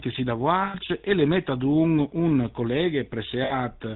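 GSM full-rate codec damage runs through the whole speech clip. The sound fits the 13 kbps first-generation GSM coder, which models the vocal tract and drives it with a coarse pulse train built from only every third excitation sample. Nothing above 4 kHz survives, so the audio is dull and band-limited, and the sparse, regularly spaced excitation adds a plainly audible buzzy, gravelly roughness to every voiced stretch.

Lost GSM frames occur from 0.64 to 0.76 s, between "si da" and "e le mette d'un", and again from 3.44 to 3.54 s. The gaps, about 100 ms and 60 ms, fit roughly five and three dropped 20 ms frames. The decoder covered each loss by repeating the last good frame's settings, so the sound holds on a rough, metallic ring instead of continuing naturally.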